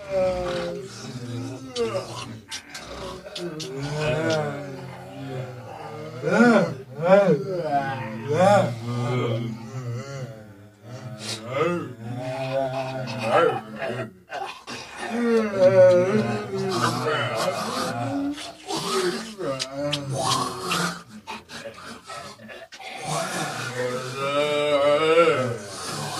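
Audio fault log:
No faults heard.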